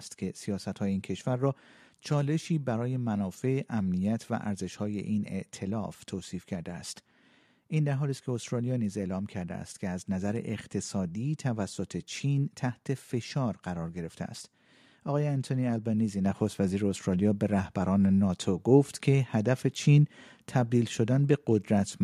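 A speech recording in which, at 16.26 s, the whole sound abruptly gets louder, by about 6 dB, and stays there: the voice and the background noise floor rise together in a single step rather than a gradual swell. That is a microphone volume stepped up fault. The call software judged the microphone input too quiet and raised the device's input volume in one jump, so everything captured after that moment is boosted equally.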